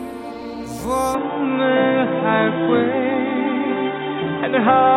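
At 1.15 s the input was likely switched to a poorer device, and the sound stays that way to the end. From there it turns dull and boxy, with nothing above 3.8 kHz, the level shifts by about 5 dB, and a faint new background noise sits about 50 dB below the signal. There is no silence at the switch.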